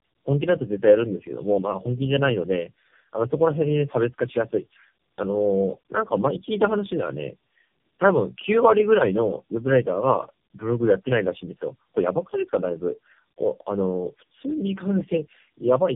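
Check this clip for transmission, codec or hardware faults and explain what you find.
Tandem speech coding affects the whole clip. The call was decoded and re-encoded by three low-rate speech codecs in turn, G.729A at 8 kbit/s and then AMR-NB at 6.7 and 7.95 kbit/s, with G.711 links between them. Each coder compressed the previous one's errors, so the speech sounds rough, muffled and warbly, with nothing above 3.5 kHz.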